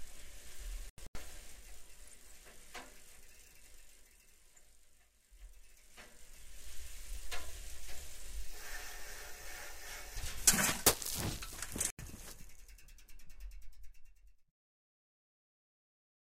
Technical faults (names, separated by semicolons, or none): corrupt frame muted